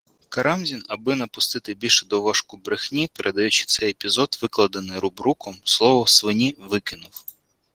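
Opus voice compression runs through the whole speech clip. The speech is coded by linear prediction, with a separate coarse layer above 8 kHz. The excitation is coded roughly. The voice sounds plainly hoarse and slightly robotic, which fits a bitrate around 16 kbps.

At 3.79 s there is a DC step. The waveform's zero line jumps suddenly. The offset then dies away slowly, as a 2 Hz high-pass would drain it. The jump is heard as a low thump or click. The speech carries on unchanged.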